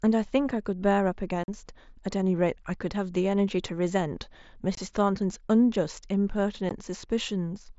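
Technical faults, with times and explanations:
1.44–1.48 s, 4.75–4.78 s and 6.69 s, unconcealed Bluetooth headset packet loss: the speech drops out for about 45 ms, 22.5 ms and 15 ms. Lost headset voice packets were replaced by silence or an idle pattern instead of being filled in, so each gap has abrupt edges. The lengths are multiples of 7.5 ms, which fits whole mSBC frames going missing on the wideband link.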